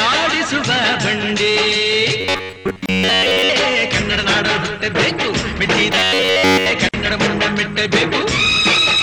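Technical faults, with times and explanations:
2.21–3.49 s and 5.93–6.71 s: robotic sound from repeated short buffers. The sound becomes a rigid, metallic buzz at 93.8 Hz. Roughly 70 percent is repeated material. The likely cause is audio arriving too seldom, so a stretch of about 10.7 ms loops while real audio is skipped.
2.86–2.89 s and 6.89–6.94 s: gap at a join of encoded pieces. The sound drops out for 29 ms, then 49 ms. It resumes where it stopped. The joins fall 4 s apart. Each piece was encoded separately, and its start delay and end padding were left in.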